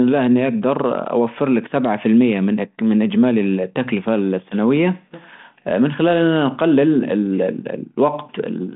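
No technical faults can be heard in the speech in this clip.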